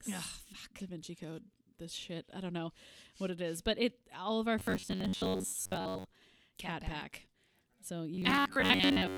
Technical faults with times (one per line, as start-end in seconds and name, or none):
4.59-6.14 robotic sound from repeated short buffers
8.14-9.17 robotic sound from repeated short buffers